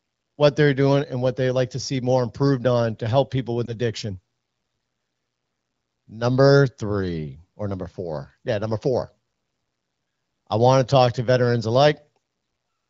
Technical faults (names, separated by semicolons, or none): lost AMR speech frames